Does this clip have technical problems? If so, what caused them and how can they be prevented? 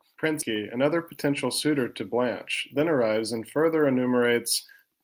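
Yes. At 0.41 s a skip ahead drops about 0.4 s of speech: queued audio was discarded in transit or by an overflowing jitter buffer, splicing the two sides with no gap. Sizing the buffer for burst arrivals prevents this.

From 1.03 to 2.02 s a jitter buffer speed-up runs the speech at 104% with unchanged pitch, trimming around 50 ms of pitch periods to shed excess delay. Smoother network delivery or gentler time-scale adaptation avoids it.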